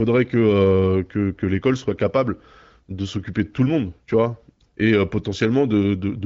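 No technical faults can be heard anywhere in the speech. It carries the bandwidth and light coding texture of an AMR wideband (HD Voice) codec at a mid-to-high rate, with nothing above about 7.5 kHz.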